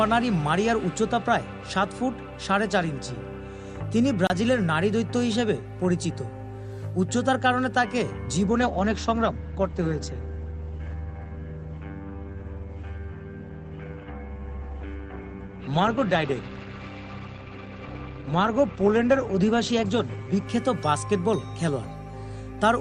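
A 30 ms block of samples was replaced with digital silence from 4.27 to 4.30 s. The audio drops straight to silence and returns with no fade, and a brief hole sits between the edges. At this length it comes across as a short dropout rather than a single tick.

From 8.47 to 20.47 s, an adaptive stream at a lower bitrate takes over. The connection slowed and the player switched to a leaner encoding, which sounds consistent with Opus falling from around 64 kbit/s to around 16 kbit/s. For those 12 seconds nothing is left above 8.5 kHz, the top end turns dull, and codec artefacts become more audible. The change in quality happens abruptly at both ends with no gap in the sound.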